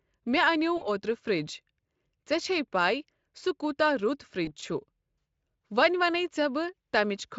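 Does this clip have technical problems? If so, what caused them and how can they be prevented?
Yes: VoIP packet loss concealed by the speech codec, at 0.77 to 0.89 s (about 40 ms lost) and 4.45 to 4.53 s (20 ms). The decoder stretches the last sound into a fading buzz, not silence, and the speech stays smeared briefly afterwards. Forward error correction and a steadier network path prevent it.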